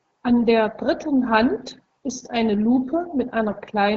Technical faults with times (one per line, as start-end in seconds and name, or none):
3.48-3.58 AMR bit errors